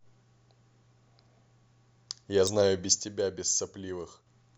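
At 2.47 s, damaged data in the compressed stream throws the decoder off: it misreads a corrupted frame, loses sync and hunts for the next valid header. The speech is interrupted by a brief glitch.

At 3.02 s a sudden gain jump, likely a digital level setting applied without a ramp, cuts the level by about 6 dB in a single step. Speech and background noise drop together at that instant and stay quieter until 4.27 s.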